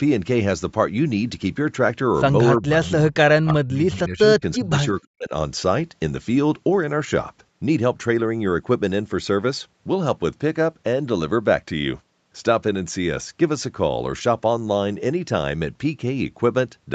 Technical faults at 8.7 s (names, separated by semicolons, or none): none